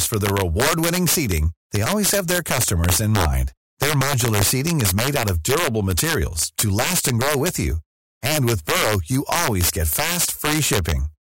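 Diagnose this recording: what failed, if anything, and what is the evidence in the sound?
Integer overflow at the sample-format or gain stage. Loud speech peaks crack violently throughout. About 7 dB overdrive wraps a small fraction of samples to the opposite sign.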